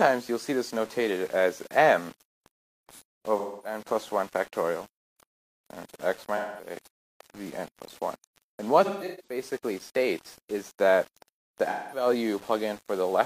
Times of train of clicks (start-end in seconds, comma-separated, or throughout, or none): none